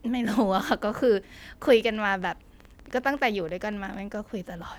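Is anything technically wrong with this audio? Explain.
Yes. From 1.68 to 4.16 s a train of clicks runs through the speech. About eight clicks arrive each second, at an uneven pace, roughly twenty in all. Each is a brief, near-identical pulse added on top of the audio. The likely cause is electrical interference from nearby equipment or a faulty connection or power supply. The clicks reach about the level of the speech itself. They are heard as irregular ticking or popping, present in the pauses as well.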